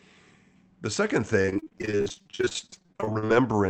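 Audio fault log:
1.41 to 3.30 s, repeated packet loss (robotic sound): packets kept arriving late or not at all, leaving dozens of gaps up to 49 ms long, nearly half the stretch patched by extending the previous sound, so the speech turns choppy, with fragments missing.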